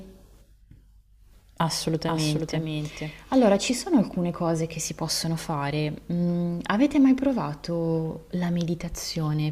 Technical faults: doubled audio track

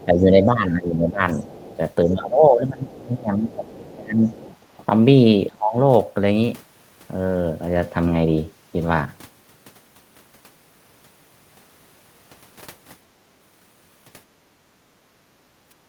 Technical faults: other side's voice leaking through; speech suppressed in double talk; background gated by the echo canceller

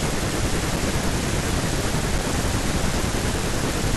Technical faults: underrun with held sample

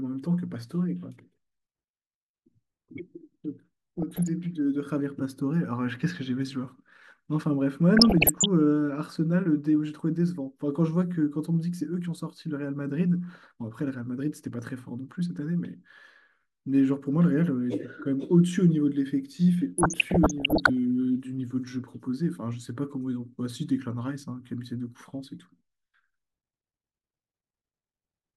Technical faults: DAB burbling

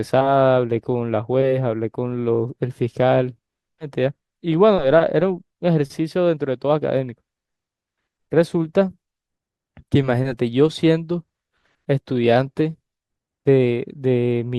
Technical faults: stream segment skipped

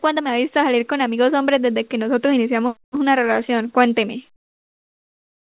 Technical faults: comfort noise in place of the background

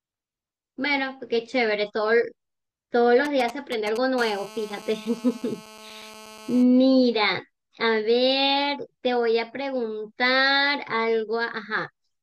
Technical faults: GSM signalling bursts; GSM phone buzz

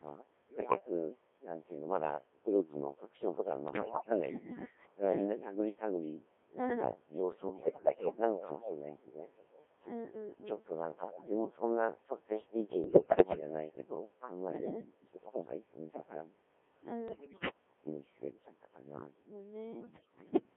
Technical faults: Codec 2 vocoder; bit errors on digital voice radio; echo leak

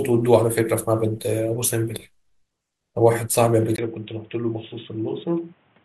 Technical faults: input switched to a poorer device

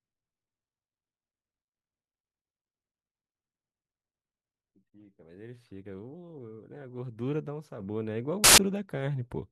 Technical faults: samples built from the wrong bytes

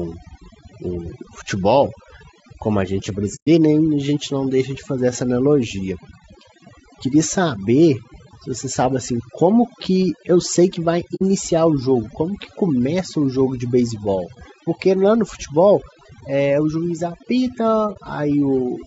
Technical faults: overdone noise removal; low-delay AAC compression; AAC frame loss with muting

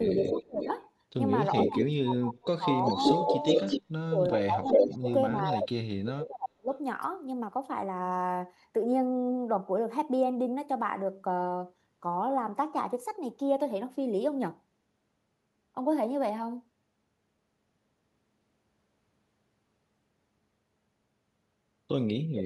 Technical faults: speech suppressed in double talk; echo leak

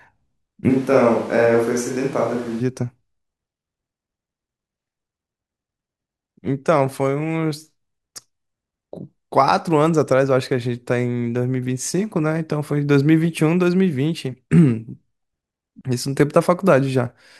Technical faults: switch to a distant microphone

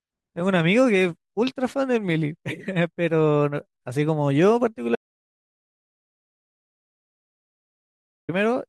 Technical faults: audio dropout to silence

